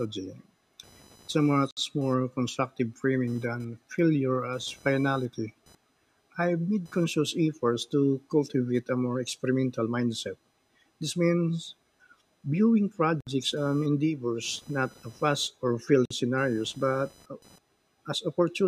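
Computer activity noise runs under the speech from the start: a thin buzzing chirp that rises and falls with the machine's processing load, not with the speech. Current drawn by the processor, graphics card or mouse shifts the shared ground of the audio circuit, and that shift leaks in as a pulse train near 1 kHz, roughly 35 dB below the speech. A spectrogram shows a faint horizontal line around 1 kHz with harmonics above it.

At 1.71 s the first gap at a join of encoded pieces appears: the speech stops dead for about 61 ms and resumes at 1.77 s exactly where it left off. The same thing happens from 13.21 to 13.27 s (63 ms) and from 16.05 to 16.11 s (52 ms). Each piece was encoded on its own, so each join keeps one run's padded final frame and the next run's start-up silence. The waveform shows a flat notch with softened edges, and the spectrogram shows a vertical blank stripe.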